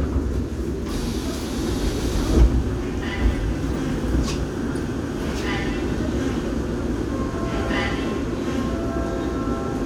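No faults detected anywhere in the clip; the sounds come through intact, with nothing to flag.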